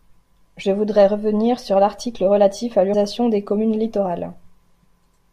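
At 2.93 s and again at 4.83 s, damaged data in the compressed stream leaves the decoder unable to read the affected frames, so it loses sync and hunts for the next valid frame header. Each break is heard as a brief glitch cutting into the speech.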